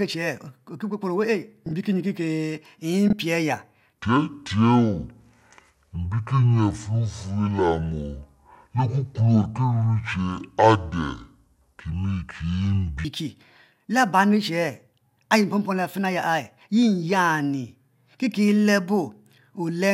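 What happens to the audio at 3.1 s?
Frames out of order, 3.08 to 3.13 s: two adjacent blocks of about 24 ms play swapped, giving a brief garbled flutter, no time lost.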